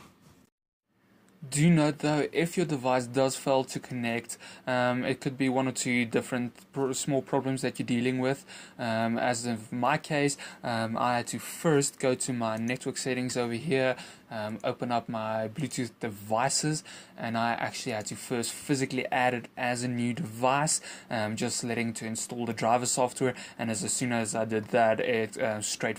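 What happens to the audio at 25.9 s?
Nothing goes wrong at 25.9 s: the audio there plays through intact, with no dropout, click or other fault.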